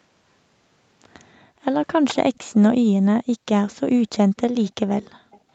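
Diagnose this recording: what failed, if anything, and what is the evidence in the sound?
Two faults sit in the call-processing stage, both tied to one side playing audio on a loudspeaker.

Background gated by the echo canceller: the room sound under the speech drops away from 1.40 to 1.62 s, by about 18 dB at its deepest, and again from 5.17 to 5.31 s, where it falls by about 40 dB, close to silence. Each dip lasts a fraction of a second before the ambience returns. The canceller judged loudspeaker playback to be active and clamped the microphone path, taking the background with it.

Echo leak: faint delayed copies of the speech appear at 2.35 to 2.54 s, 4.36 to 4.41 s, 5.02 to 5.08 s and 5.31 to 5.40 s. They trail the original by a steady 316 to 317 ms and sit roughly 30 to 35 dB below the speech, so they come through as short scraps rather than a clear repeat. The likely cause is a loudspeaker-side echo canceller leaving part of its microphone pickup unremoved and sending it back. 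The band stops at 8 kHz, consistent with the call's microphone processing.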